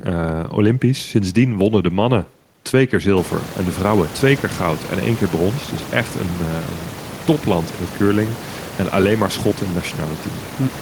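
The speech signal is intact, with no technical faults; the background noise of the room, which rises by about 25 dB around the 3-second mark and then sits about 16 dB below the speech, belongs to the recording itself rather than to the system.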